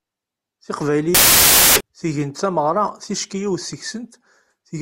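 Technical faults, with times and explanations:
1.15–1.81 s, samples built from the wrong bytes: misaligned bytes make the fast-changing low bits dominant, producing loud, harsh broadband noise, seen as a full-band spectrogram block and a dense waveform slab.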